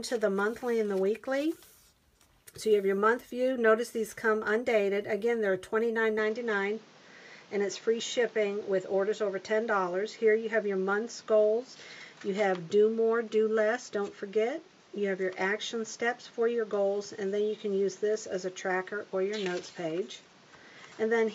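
From 6.19 s to the end the sound turns duller, with nothing above 7.6 kHz and a faint new background noise, at much the same level, likely from the input switching to a poorer device.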